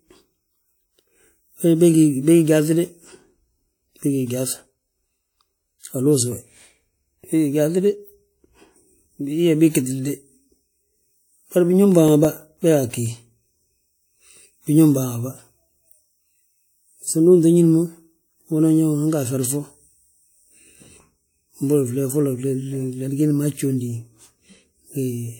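A scratch on the disc carrying this speech recording wipes out more data than the player's error correction can rebuild, once per revolution. The player patches or mutes each damaged stretch, giving CD scratch ticks: nine brief clicks between 11.92 and 13.23 s, about seven a second, none longer than around 5 ms.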